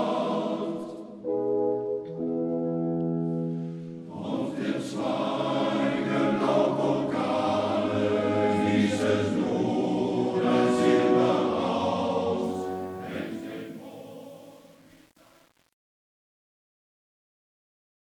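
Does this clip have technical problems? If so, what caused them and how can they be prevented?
Yes. Truncation distortion on a fade runs from 12.43 s to 18.18 s. From 12.77 s to the end the tail turns gritty. The fade or volume stage kept too few bits and added no dither. As the level fell toward the smallest step, the waveform collapsed into coarse square steps, which fits an 8-bit stage. To prevent it, process fades at high bit depth and apply dither before any final reduction.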